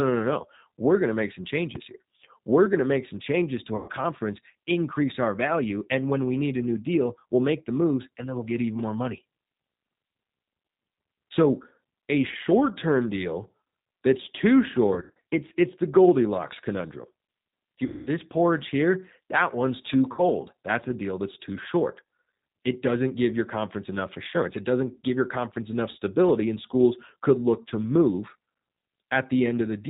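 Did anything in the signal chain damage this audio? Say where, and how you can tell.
Yes. The G.729 codec, running at 8 kbit/s across the whole clip, rebuilds the speech from a synthetic model, leaving it plainly rough and buzzy with nothing above 4 kHz.

At the converter stage, a DC step at 1.76 s, right after "going to make some", shifts the zero line and then settles away. It is heard as a low thump.

On the network side, VoIP packet loss concealed by the speech codec appears at 3.76–3.90 s, 14.94–15.22 s (between "deal that's too" and "it's it's the"), 17.86–18.09 s, and 20.12–20.28 s after "one's too". The decoder extrapolates across the gaps, so the speech smears into fading buzz and stays weak for a moment after each one.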